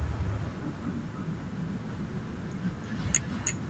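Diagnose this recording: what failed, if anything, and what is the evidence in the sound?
Echo with no canceller, throughout, in call processing: the speech returns roughly 300 ms later, about 14 dB quieter, because the far end's loudspeaker-to-microphone leakage goes uncancelled.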